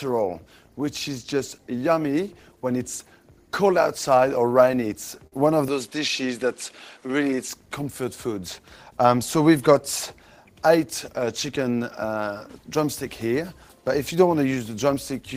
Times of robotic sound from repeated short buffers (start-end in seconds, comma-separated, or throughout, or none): none